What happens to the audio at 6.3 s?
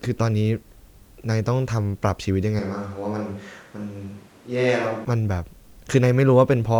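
Nothing goes wrong at 6.3 s; the speech carries on intact through that moment with no dropout, click or distortion.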